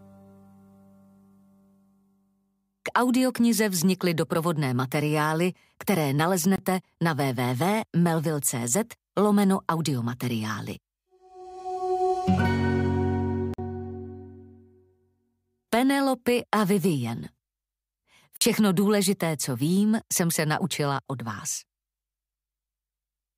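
The audio drops into three blocks of digital silence. The first is at 6.56 s and lasts about 23 ms. The second, at 13.54 s, and the third, at 18.37 s, each last about 46 ms. Every block cuts in and out with no fade. The first sounds like a short hole. The longer two sound like brief holes. The lengths fit 1024- and 2048-sample blocks, which points to output buffers not being filled in time.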